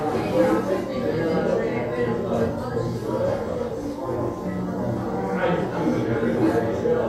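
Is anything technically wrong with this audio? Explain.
No, nothing here sounds technically off; it's just a clip of sounds coming through the way they should.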